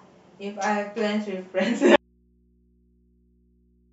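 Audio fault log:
1.96 s to the end: audio dropout to a faint residue. The speech cuts off abruptly mid-flow rather than pausing or fading, and does not return before the clip ends. What remains in the gap is mains hum at a very low level, something like 45 dB below the speech. That points to the wanted signal being lost while the path after the break stayed live, likely an interrupted feed leaving an open input that picks up hum.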